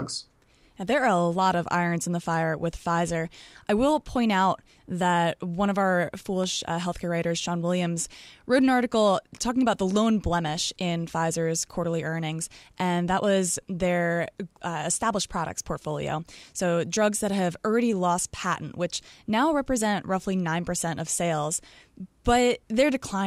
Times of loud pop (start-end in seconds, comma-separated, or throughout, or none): 6.44-6.46